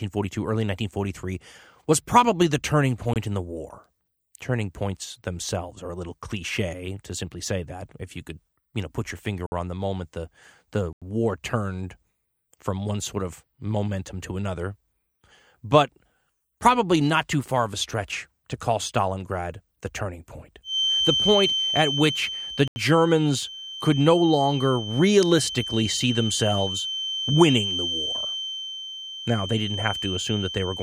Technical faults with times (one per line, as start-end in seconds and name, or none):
3.13-3.16 block of digital silence
9.46-9.52 block of digital silence
10.93-11.02 block of digital silence
20.62-30.83 feedback whistle
22.68-22.76 block of digital silence